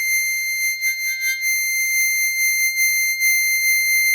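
Music, no technical faults heard.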